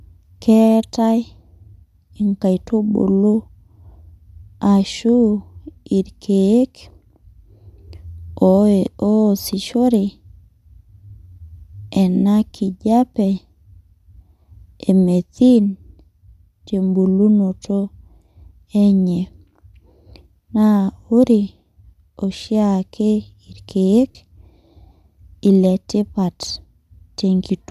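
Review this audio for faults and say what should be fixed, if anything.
Lost LE Audio frames at 12.50 s (about 20 ms) and 24.11 s (about 40 ms): the decoder refilled each gap with the last spectrum, giving a brief noisy smear. A stronger Bluetooth link, with the devices closer and less radio interference, should prevent these dropouts.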